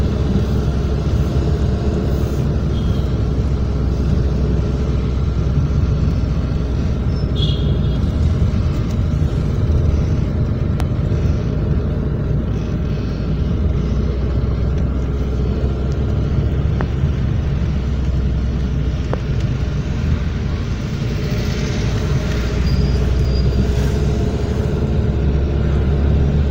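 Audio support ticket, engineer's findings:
Loud pop, three single events at 10.80, 16.81 and 19.14 s, each about 20 ms. Sharp transient roughly 15 dB above the programme, which continues underneath unbroken. Likely cause: voltage step or spike entering the chain, from a connector, switch, static discharge or driver glitch. Downstream stages shape the pulse into a brief thump. Isolated and irregular, not periodic. Check cabling, grounding and driver logs near these times.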